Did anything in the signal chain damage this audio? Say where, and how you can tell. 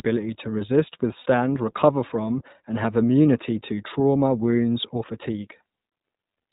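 Yes. The codec stage narrowed and coarsened the whole clip: an iLBC codec, which fits its 15.2 kbps mode with 20 ms frames, removed everything above 4 kHz and coded the excitation frame by frame. The speech sounds dull, slightly rough and synthetic throughout.

Lost iLBC frames on the network side caused three short dropouts. About 60 ms went at 1.20 to 1.26 s after "to resist", about 20 ms at 3.77 s before "trauma wounds or", and about 40 ms at 5.88 to 5.92 s. Each gap is filled by a repeated pitch cycle mixed with noise, so it sounds like a held, buzzy vowel, and the speech recovers at once.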